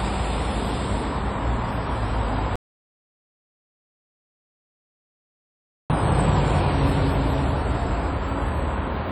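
An audio dropout to silence runs from 2.56 to 5.90 s, about 3.3 s of pure silence with no background left, most likely from a lost input or link while recording continued. The whole clip of everyday sound also carries compression damage that is likely WMA compression, with heavy ringing and washy smearing around events and hiss that pumps with the signal. This fits long transform blocks at a low bitrate, somewhere near 32 kbps.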